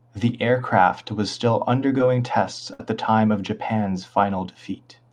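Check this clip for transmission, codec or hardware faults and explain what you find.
Two transmission faults show up in this speech, both from lost packets.

At 1.98 s there is a brief smear where about 10 ms of audio is gone. This is short concealed packet loss: the receiver extended the preceding sound for around 7 ms and then blended back into the real signal.

From 2.73 to 2.80 s the sound stalls into a held, fading tail before picking up further along. This burst of packet loss dropped about 60 ms of audio, and the receiver covered roughly 61 ms by continuing the last sound while turning it down.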